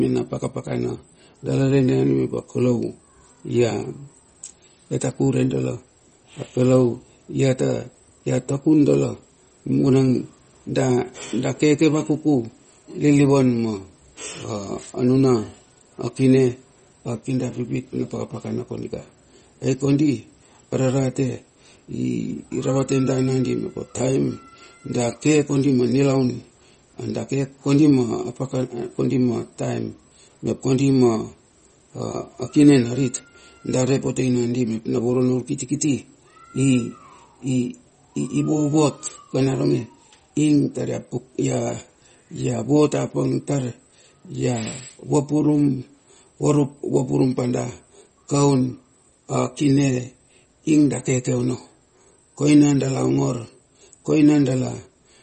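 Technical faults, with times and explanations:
Throughout, MP3 compression: The speech has nothing above about 8.4 kHz, so it sounds dull and boxed in. Codec damage is plainly audible. Sibilants turn watery and swirly, and consonant attacks smear. The likely cause is a low-bitrate MP3 encode, one that points to roughly 32 kbps. With so few bits, the encoder cuts the treble at a fixed point. It also drops weak frequency lines, which flicker in and out between frames.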